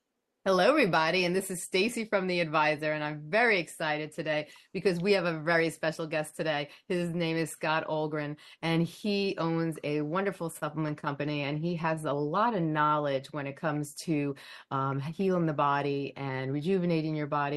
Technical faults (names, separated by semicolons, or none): scattered short gaps; jitter buffer slow-down; jitter buffer speed-up